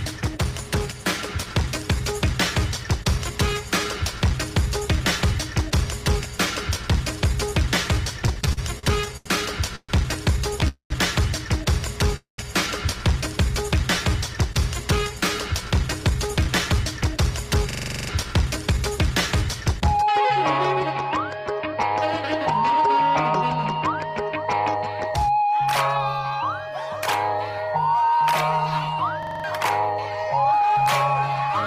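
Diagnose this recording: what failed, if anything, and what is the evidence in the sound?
Packets reached the jitter buffer late and unevenly between 8.19 and 10.64 s, so it ran dry 11 times. Repeated stalls (stutter) result: each gap, the longest 131 ms, is filled by stretching the last sound, about 16% of that span, so the audio drags and hitches.

A call audio freeze occurs at 10.68–10.92 s and again at 12.16–12.40 s, each about 0.22 s long. A network hold-up is the likely cause. The last sound is continued and fades to silence for roughly 0.11–0.12 s before playback resumes.

After delays, the jitter buffer held too much audio and trimmed pitch-period slices to catch up. This jitter buffer speed-up runs at 102% from 16.03 to 20.28 s and at 104% from 25.11 to 31.50 s. Pitch holds, but the pace runs slightly fast.

At the driver or buffer stage, the host stalled while the hardware kept replaying its ring buffer. 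The result is a system hang loop at 17.71–18.09 s (9 repeats) and 29.23–29.44 s (5 repeats). A 42.67 ms segment, consistent with a 2048-sample buffer, repeats 23.4 times a second, replacing roughly 0.4 s and 0.2 s.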